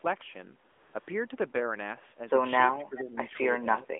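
Speech over a narrowband mobile line, passing roughly 250 Hz to 3.5 kHz with light AMR coding damage, carries AMR comfort noise from 0.72 to 0.94 s and from 1.0 to 1.08 s. During those stretches the real background gives way to a steady, smooth synthetic hiss that switches in and out. A packet dropout would fall to silence or glitch instead. From 2.77 to 3.15 s the voice dips by about 10 dB for roughly 0.3 s in total, and from 3.86 s to the end it drops by about 20 dB. This is speech suppressed in double talk, likely the echo canceller turning down the talker while the far side spoke. Because the level is turned down rather than the sound breaking off, it differs from a codec cutout. Faint echo leak appears at 2.97–3.01 s and 3.82–3.86 s as a distinct delayed copy of the voice arriving about 0.41 s late, about 20 dB and then about 30 dB below the speech. It is likely loudspeaker pickup that the far end's canceller failed to remove, and the clear gap before the copy sets it apart from room reverberation.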